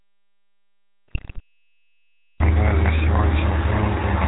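GSM full-rate codec coding runs through the whole clip. The speech passed through the first GSM codec at 13 kbps, which models the vocal tract and drives it with a thinned, regularly spaced pulse excitation, discarding everything above 4 kHz. The result is a plainly audible buzzy, gravelly roughness and a dull, band-limited sound.

An audio dropout to silence is already under way when the clip begins and lasts until 2.4 s. The gap is silent with no room tone, likely because the input was lost while the recording carried on writing silence. The sound then enters abruptly in mid-flow.

GSM bit errors appear from 1.08 to 1.4 s. Corrupted bits reached the speech decoder at a rate pointing to roughly 3%, scrambling the filter, pitch and gain values across successive frames. This bends the spectrum and throws the level about, producing a short burst of squawks, pops and gargling.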